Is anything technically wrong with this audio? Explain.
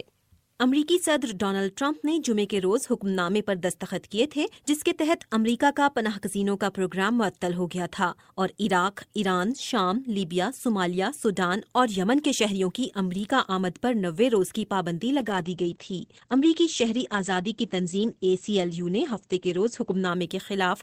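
Yes. From 15.2 s to about 20.15 s there is a call bitrate drop. The encoder's bit budget collapsed, consistent with a fall from roughly 64 to 11 kbps. It coded coarsely and cut the bandwidth from 20 kHz to 8 kHz, so the sound turns muffled and rough. On a spectrogram, energy above 8 kHz vanishes.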